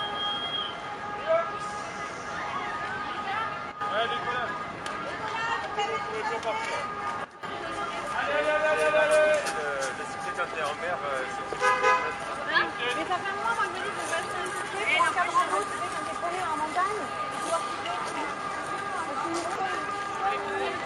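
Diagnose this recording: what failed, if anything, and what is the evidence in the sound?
A digital gain setting, likely applied in the processing chain without any ramp, caused two sudden gain jumps. At 3.72 s the level falls abruptly by about 9 dB and holds there until 3.81 s. At 7.25 s it drops by about 12 dB until 7.43 s. In both cases the sound and its background noise step down together from one sample to the next, with no fade in or out.

Damaged data in a compressed stream, at the codec or storage stage, breaks the sound at 19.56 s. For about 60 ms, until 19.61 s, the decoder was handed corrupted frames. It misread them, lost its place in the stream and had to search for the next valid frame header. What comes out is a brief disturbance before the sound resumes.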